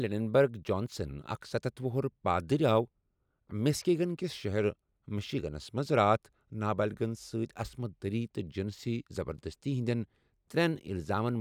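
No technical faults can be heard anywhere in the speech. There is no moment in the recording that needs a time or a value pointed out.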